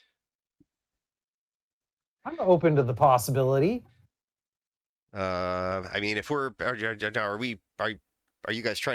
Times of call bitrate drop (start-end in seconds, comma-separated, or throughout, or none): 0.64-3.25